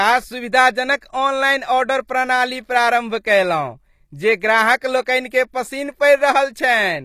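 HE-AAC compression runs through the whole speech clip. The sibilants have a gritty, metallic, lispy edge, and the treble, though still bright, doesn't quite belong to the lower part of the sound. Nothing reaches above about 14.9 kHz. The likely cause is a codec at a low bitrate, around 24 kbps, that codes only the lower spectrum and copies those bands upward under a rough envelope, so harmonics fail to line up across the join.

Pre-echo appears from 0.98 to 1.02 s, a short hiss lasting about 41 ms just ahead of a sharp onset, which itself sounds blunted and smeared. A transform codec spreads its quantisation noise across an entire block. When a strong attack lands near the end of that block, noise sized for the loud moment also leaks into the quiet stretch before it and announces the attack early.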